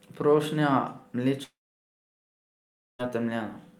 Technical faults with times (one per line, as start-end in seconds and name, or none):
1.43-3.01 long network dropout